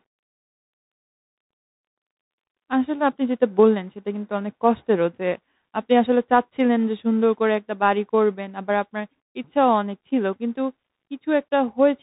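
Throughout the speech, a Bluetooth CVSD headset codec band-limits everything to about 4 kHz. Its one-bit up/down delta coding, consistent with a 64 kbps stream, lags fast loud transients, so sibilants turn scratchy and a granular hiss sits under the speech.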